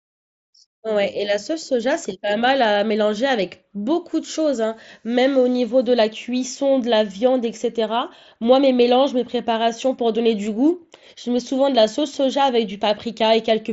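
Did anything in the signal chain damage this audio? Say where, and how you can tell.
No, nothing in the chain damaged this speech; the band stopping at about 7.7 kHz and the light grain on louder passages are what a working Bluetooth mSBC headset codec leaves behind.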